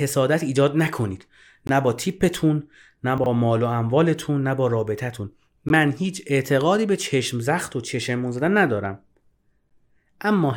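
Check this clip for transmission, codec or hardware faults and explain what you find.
Two kinds of fault turn up in this speech clip: short silent holes at segment joins, and one moment where audio chunks play in the wrong order.

Gap between stream segments at 1.67 s, 5.69 s and 9.70 s. The stream arrives in 2.0-second segments, and at these joins the timestamps leave a hole that the player fills with silence, about 18 ms, 16 ms and 12 ms long. Nothing is lost, but the speech stops dead for an instant. On a waveform each is a flat line with sheer edges. On a spectrogram it is a thin vertical blank stripe through every frequency.

Chunks out of order from 3.18 to 3.26 s. The audio here is cut into 20 ms chunks, and one arrived late and played three chunks after its proper place. No material is missing, but the sequence is scrambled, giving a brief jumbled stutter with three hard joins. 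A waveform shows abrupt discontinuities at those joins. A spectrogram shows speech patterns that jump rather than flow.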